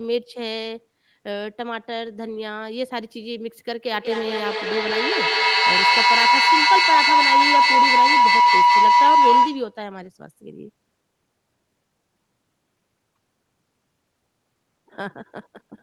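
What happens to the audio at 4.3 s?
At 4.3 s you're just into a feedback howl that runs from 3.93 s to 9.83 s. Two devices in the same room are on the call, so the sound loops mic to speaker and back, getting louder each pass instead of dying away. It narrows to a tone around 1 kHz, with the loop repeating roughly every fifth of a second, and peaks at about 11 dB above the speech before it cuts off.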